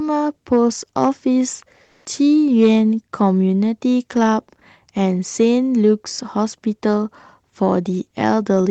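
Speech clip with a brief comfort noise in place of the background between 1.83 and 2.05 s. For about 220 ms, the quiet background, sitting about 53 dB below the loudest speech, is replaced by a flat, featureless hiss that shifts the background level by about 6 dB. This is likely Opus discontinuous transmission, where the receiver synthesises noise during a pause. Unlike a noise gate, the gap is filled rather than silent. Unlike packet-loss concealment, it does not smear the preceding sound. The call path limits the audio to roughly 8 kHz throughout.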